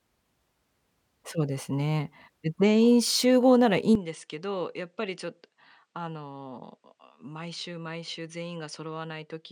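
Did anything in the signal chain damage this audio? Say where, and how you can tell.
Yes. From 3.95 s to the end, the speech drops about 10 dB and loses everything above 9.6 kHz, with no gap, and a faint new noise floor appears well below it. This points to the input likely being switched to a poorer device at the driver stage.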